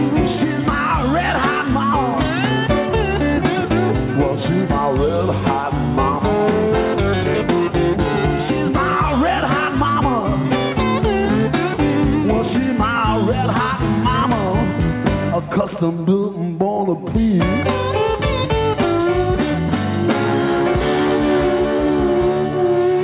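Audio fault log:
Nothing to log here, as no faults turn up anywhere in the audio.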